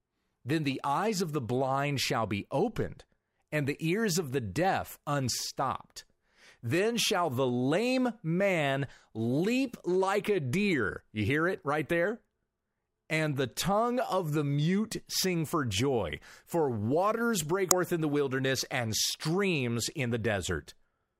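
At 17.71 s, after "joy for waters break", damaged data in the compressed stream knocks the decoder out of sync, giving a tiny glitch: a thin vertical broadband streak and waveform discontinuity.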